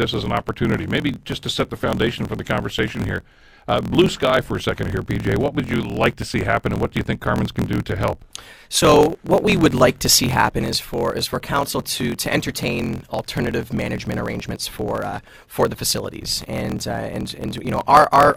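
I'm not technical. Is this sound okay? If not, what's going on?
No. A block size mismatch (truncated) runs from start to finish. One stage passes on longer chunks of sound than the next stage takes in, so the end of each chunk is cut off. That causes a low buzz about 43 times a second, and the speech plays 1.12 times too fast, though the voice keeps its character.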